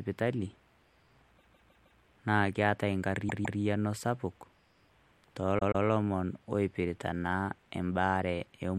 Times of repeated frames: 1.37-2.00, 3.28-3.59, 5.58-5.84

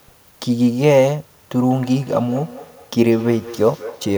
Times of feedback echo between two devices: 1.52-4.18

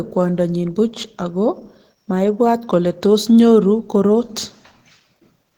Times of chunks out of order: none

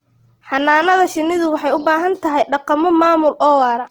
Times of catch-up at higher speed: none

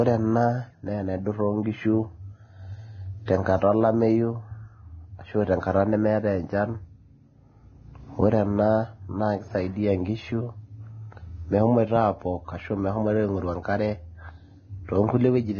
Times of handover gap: none

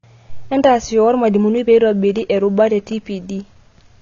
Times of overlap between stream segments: none

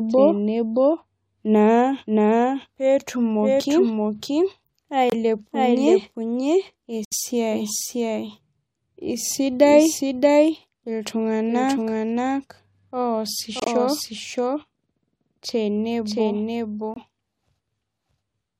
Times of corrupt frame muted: 5.10-5.14, 7.05-7.13, 13.60-13.68, 16.94-16.98

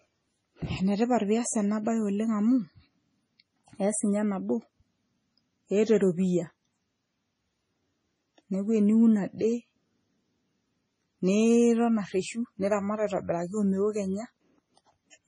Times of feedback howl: none

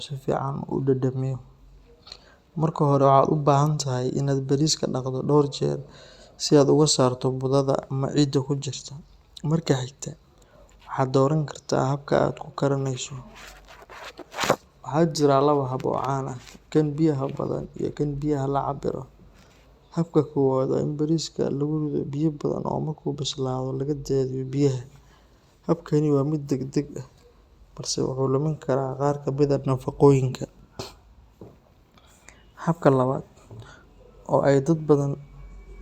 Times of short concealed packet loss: none

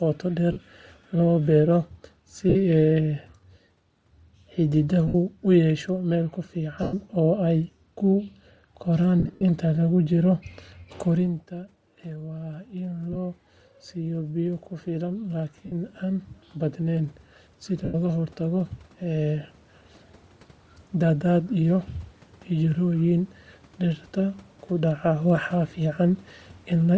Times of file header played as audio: none

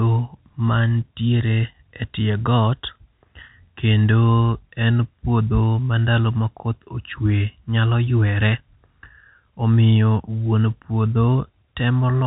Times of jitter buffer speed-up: none

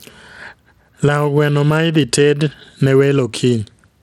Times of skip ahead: none

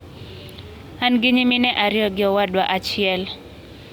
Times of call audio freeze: none

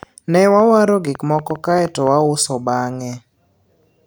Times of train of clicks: 0.03-2.08

